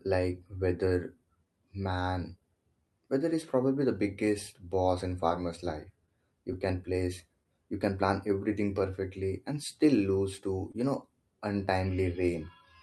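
Clock drift between sender and receiver runs through the whole speech clip: the sending clock is about 2 percent slower than the receiver's, so the jitter buffer keeps draining. The receiver has to stretch the audio continually to keep pace, which gives the timing a faint, persistent unevenness.

Repeated timing corrections, from 0.08 s to 11.96 s, are the result. The receiver repeats short pieces at uneven intervals, playing the material at 99 percent speed and adding roughly 200 ms in total. They come across as slight hiccups and a gently dragging tempo.

Scattered short gaps, from 6.06 s to 7.47 s, come from about three lost or late packets. The receiver patches each one by continuing the preceding sound, so nothing goes missing. Around 30 ms is filled altogether, and the longest gap is about 15 ms, heard as tiny ticks or smears.

A short stall from a late packet, from 10.72 s to 10.76 s, happens when the buffer runs empty. 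The receiver holds the last sound for 21 ms until the packet arrives, then resumes from the same point. The 21 ms delay shift leaves a briefly held sound with a slight buzz.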